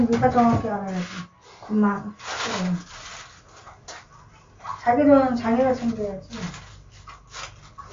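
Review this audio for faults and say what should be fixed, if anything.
The whole clip has plainly audible MP3 compression damage, likely from a low-bitrate encode, something around 48 kbps by the sound of it. Nothing comes through above about 7.2 kHz because the encoder chopped the treble off at a fixed point to save bits. Below that, quieter frequency detail flickers in and out frame to frame as the encoder drops weak components, giving a watery, swirly texture and softened transients. To prevent it, keep a lossless or high-bitrate master and only encode at low bitrates for final delivery.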